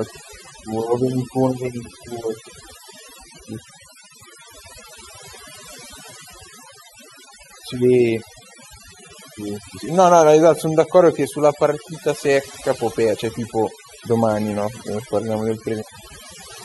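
Overdone noise removal runs through the whole recording. The noise reduction was set far too hard. Any frequency band close to the estimated noise gets cut deeply. Softer parts of the speech vanish with it. The background drops and breaks up into twinkling specks.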